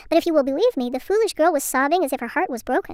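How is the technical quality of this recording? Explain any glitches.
The recording has one fault, and it affects the whole clip. Wrong sample rate, throughout: the samples are played faster than they were captured, with no conversion, about 1.38 times faster, which fits 32 kHz audio played at 44.1 kHz. Speed and pitch rise together, so the speech runs hurried and sits about 5.5 semitones high, thin and chipmunk-like.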